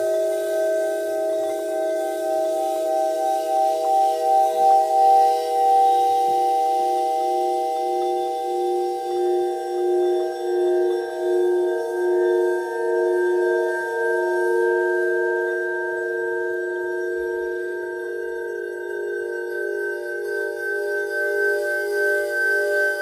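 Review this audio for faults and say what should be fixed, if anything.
Nothing needs fixing: no technical faults can be heard anywhere in the recording, and the signal holds steady throughout.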